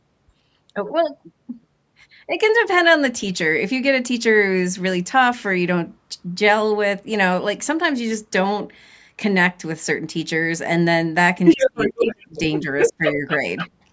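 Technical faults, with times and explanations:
11.45–12.59 s, 12.79–13.37 s and 13.57 s: other side's voice leaking through. A second voice appears behind the talker in three bursts. In the first two it is about as loud as the talker. The brief last scrap, at 13.57 s, is roughly 10 dB quieter. The likely cause is a loudspeaker on the talker's device playing the far end into the microphone, with the echo canceller failing to remove it fully. That leftover echo is what sounds like a second voice.
11.55–12.36 s and 12.89–13.25 s: speech suppressed in double talk. While the second voice is present, the talker's level dips by up to around 20 dB. The dips add up to about half a second in the first stretch and a fifth of a second in the second. The voice sinks in patches instead of holding steady. With both sides sounding at once, the echo canceller likely could not separate its own talker from the echo. 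It turned everything down, so the talker was pulled under along with the leak.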